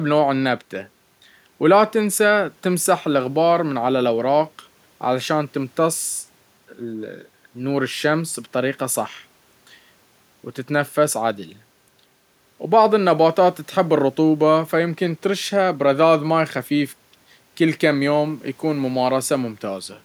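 No technical faults can be heard in the speech at any point.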